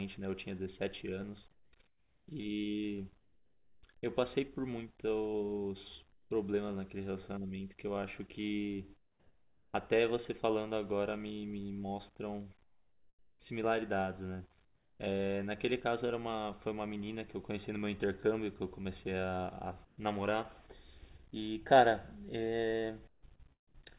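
The sender's voice detector, likely cutting transmission during pauses, left the receiver to fill gaps with comfort noise in place of the background: about 1.4 s between 1.51 and 6.31 s, 0.77 s between 8.97 and 9.74 s, 1.1 s between 12.63 and 15.00 s, and 0.13 s between 19.85 and 19.98 s. The real background, sitting about 38 dB below the loudest passages, gives way to a flat, featureless hiss, about 4 dB quieter around 9 s and at an unchanged level near 20 s.

From 23.09 to 23.75 s, the detector likely toggled repeatedly, and the sound is chopped by the voice detector. About 0.21 s of the sound is replaced with synthetic fill, so it turns choppy. Throughout, the narrowband call codec leaves nothing above 4 kHz.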